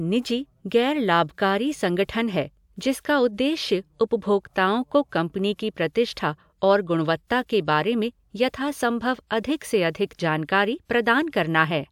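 Speech with no audible faults.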